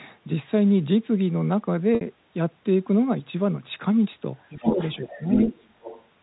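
At 1.95 s, packet loss with pitch repetition: about 60 ms of audio went missing, which fits two lost packets, and the receiver filled the gap by repeating the last pitch period. Until 2.01 s the speech holds on a brief, slightly buzzy sustained tone before normal audio resumes.

From 4.4 s to 6.04 s, the other side's voice leaks through. The likely cause is the far end playing over a loudspeaker and the echo canceller leaving part of it in the microphone signal. The second voice sits only a few decibels below the talker's.

Within that stretch, from 4.53 s to 4.79 s, speech is suppressed in double talk. With both sides speaking at once, the echo canceller likely mistook some of the talker's speech for echo and turned it down. The voice dips by roughly 5 dB, for about 150 ms in total.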